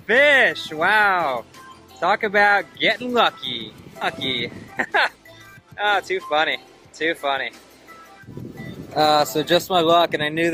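At 4.01 to 4.03 s there is a skip ahead. About 0.7 s of audio was dropped, and the sound jumps forward with no gap filling the join.

From 4.45 to 6.64 s comes a jitter buffer speed-up. Short pitch-period pieces were cut repeatedly, about a third of a second in all. The sound runs at 114% speed, hurried but unchanged in pitch.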